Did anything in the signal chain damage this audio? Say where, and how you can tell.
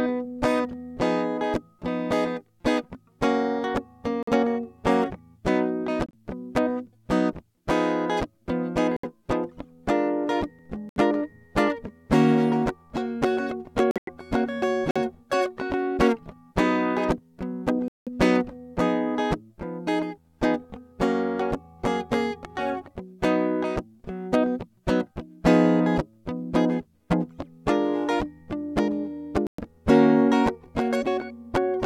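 Yes, at the codec stage. This is corrupt frame muted. The music drops abruptly to silence at 4.23–4.31, 6.06–6.15, 8.97–9.05, 10.89–10.97, 13.91–14.09, 14.91–14.97, 17.88–18.09 and 29.47–29.61 s. Each gap lasts a few whole codec frames. The decoder rejected damaged frames, and the player muted them. Timing stays intact.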